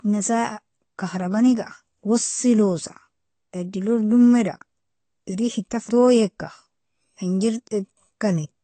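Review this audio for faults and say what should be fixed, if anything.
AAC compression damage runs throughout the speech: nothing above 8.5 kHz survives, leaving it dull, with a warbling, fizzy smear on sibilants. On a spectrogram the energy stops at a flat ceiling at 8.5 kHz. The plainly audible damage points to a low-bitrate AAC-LC encode, likely around 32 kbps. Encode from the original at a higher bitrate, or keep a lossless master, to avoid it.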